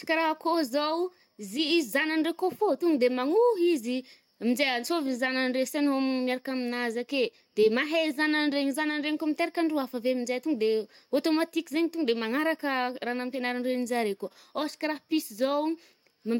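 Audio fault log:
No faults are heard in this speech recording. Nothing in the audio calls for an entry in this log.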